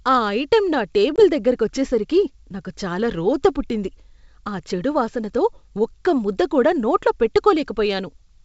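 A speech clip with a hard-edged gap of about 20 ms near 1.16 s, between "ఆ ఐటెం నా" and "దగ్గరకొచ్చేసరికే నాకు చాలా రోతపుట్టింది". The sound returns with slight distortion that settles by about 1.23 s. This is packet loss on an ADPCM call. Roughly one packet was dropped and replaced by silence. The decoder's adaptive predictor and step size then fell out of step with the sender's and needed a few tens of milliseconds to resynchronise. The wideband G.722 coding itself sounds clean.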